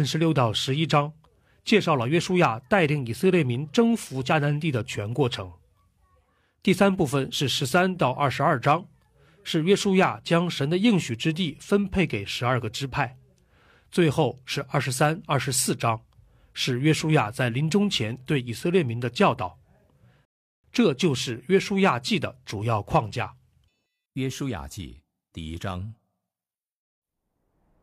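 At 20.25 s the player ran out of downloaded audio and had to halt until more data arrived, a rebuffering stall. The speech cuts abruptly to silence and stays silent until 20.64 s, when it picks up again at exactly the point where it stopped. No speech is skipped or repeated, but the pause inserts roughly 388 ms of dead air that breaks the natural rhythm of delivery.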